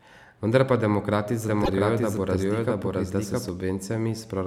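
From 1.48 s to 3.49 s a doubled audio track is present. A second full-band copy of the speech runs roughly 0.7 s behind the original at about the same level. It has no reverberant tail or room colouring, which rules out an acoustic echo. It cuts in and drops out abruptly at those boundaries. The likely cause is the signal being captured twice, once through a slower path, or an edit leaving two misaligned copies summed together.

Inside that doubled span, at 1.63 to 1.69 s, there are repeated frames. A block of 26.1 ms is played one extra time, so the speech stutters briefly and gains 26.1 ms of length. That duration fits a single compressed codec frame being written or transmitted twice. The decoder outputs the same slice again.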